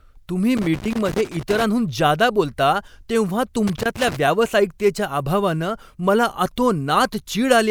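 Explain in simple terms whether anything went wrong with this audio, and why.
Two bursts of rough, irregular crackling and scratching break into the speech, one from about 0.57 to 1.63 seconds and a shorter one from 3.67 to 4.17 seconds. This is loose connector crackle. A worn or dirty contact somewhere in the cable or plug kept touching and losing touch as it shifted. That chopped the signal on and off many times in quick succession, which is heard as that uneven, gritty noise rather than a clean dropout.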